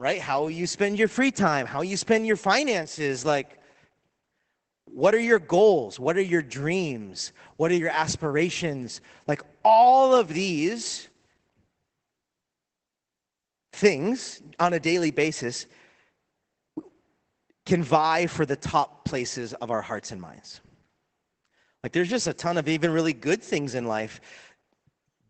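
It's a speech clip, and the whole thing carries Opus voice compression damage that you can plainly hear. There's nothing above about 8.4 kHz, so it sounds muffled, and that wideband cut-off plus the slightly hoarse, robotic edge on the voice points to the SILK linear-prediction coder running at a low rate, something like 12 kbps. At that rate the excitation gets coded coarsely, which is where the roughness comes from, and it sits across the full length of the clip.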